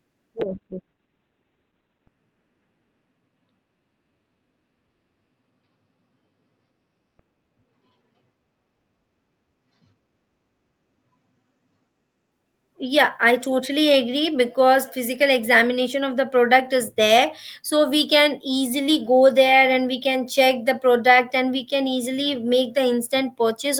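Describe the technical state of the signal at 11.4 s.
At 11.4 s the speech is still in the call bitrate drop (0.43 to 12.37 s). The encoder is starved, below its earlier 32 kbps, so it's coarse, watery and muffled.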